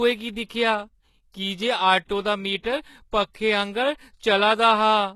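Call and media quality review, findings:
Speech, throughout: dull top end, nothing above 12.3 kHz, with smeared, swirly low-bitrate artefacts despite a large file. Likely low-bitrate audio saved at a high bitrate: the sound fits an earlier very-low-rate HE-AAC pass re-encoded as high-rate MP3, which preserves the damage but cannot undo it. Unlike a plain steep filter or one clean low-rate encode, the file size suggests generous bitrate while the artefacts suggest a starved one.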